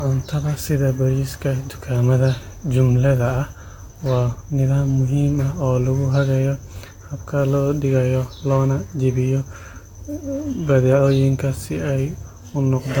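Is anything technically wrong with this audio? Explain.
Yes. Generation loss runs throughout the speech: the sound is swirly, smeared and hollow, with blurred attacks and nothing above 19.2 kHz, likely from about four lossy re-encodes near 70 kbit/s, each stacking new quantisation noise.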